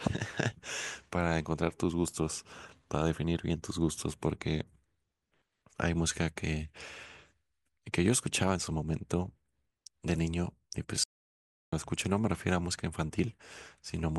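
It's a speech clip with one audio dropout to silence, from 11.04 to 11.72 s. The sound cuts off mid-flow into dead silence with no room tone, and about 0.69 s of speech is simply gone. That's most likely the input dropping out while the recorder kept writing silence.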